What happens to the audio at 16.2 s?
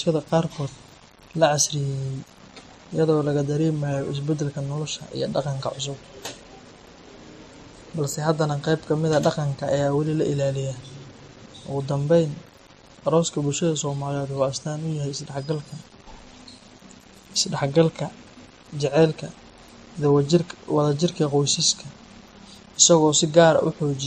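At 16.2 s the speech has a grainy, gritty edge that follows the voice, with a noise floor roughly 30 dB down. That's likely low bit depth without dither, consistent with rounding to about 8 bits. Over the same stretch, and through the whole clip, there's a mix of smeared, swirly codec artefacts and nothing above 14.4 kHz, which points to transcoding between lossy codecs, probably a WMA pass followed by a low-rate MP3.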